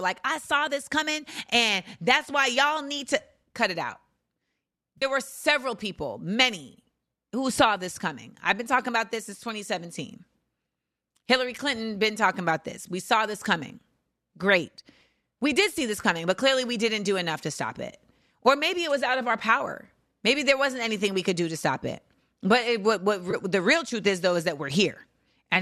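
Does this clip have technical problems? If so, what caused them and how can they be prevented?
Yes. AAC frame loss with concealment occurred three times: at 4.98 to 5.05 s, 16.02 to 16.04 s and 23.31 to 23.34 s. The decoder patched each gap from the last good spectrum, leaving brief smeared, noisy patches in the speech. The first gap, about 40 ms, fits four lost 10 ms frames, which suggests the stream is likely low-delay AAC. Adding forward error correction or a larger jitter buffer to the transport would keep frames from going missing.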